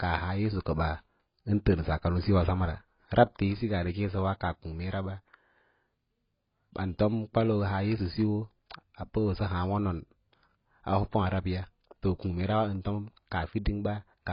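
AAC compression damage runs throughout this speech: nothing above 5.1 kHz, with dull, smeared, warbling sibilants, likely from heavily quantised AAC-LC at a bitrate around 16 kbps.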